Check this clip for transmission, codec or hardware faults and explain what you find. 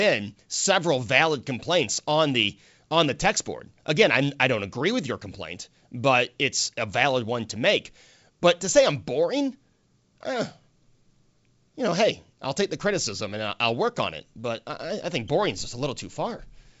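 No faults found in this speech recording.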